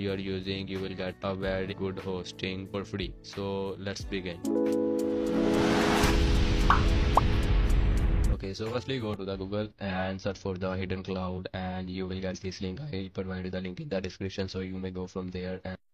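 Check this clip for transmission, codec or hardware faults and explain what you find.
One codec fault appears twice. Compressed frames skipped at 1.68 s (about 100 ms, roughly two frames) and at 11.34 s (about 50 ms, one frame): missing or rejected frames make the audio jump ahead.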